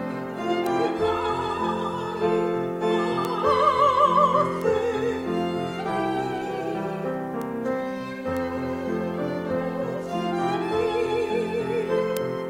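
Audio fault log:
0.67, 3.25, 4.62, 7.42, 8.37, 12.17 s, bit error spike: a single corrupted sample at each time jumps to about -9, -9, -15, -15, -15 and -3 dBFS and snaps straight back, giving a bare broadband tick unrelated to the surrounding sound. Unlike a dropout click, no audio is missing.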